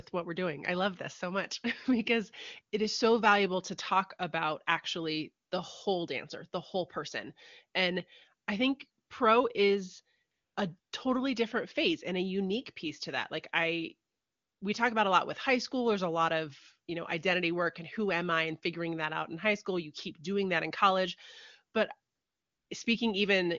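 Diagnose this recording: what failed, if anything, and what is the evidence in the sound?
AMR comfort noise, in the codec's silence handling. Speech frames stop at 5.45–5.51, 9.05–9.09, 10.31–10.55, 10.79–10.91, 14.09–14.61 and 22.13–22.69 s. The receiver fills each gap with smooth synthetic noise, so the real background drops out, as after "I think pro is".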